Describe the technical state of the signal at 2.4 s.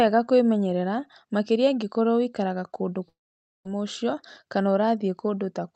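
At 2.4 s the speech is intact, with no dropout, click or distortion, only the ordinary coding character of the call path and its band limit at about 8 kHz.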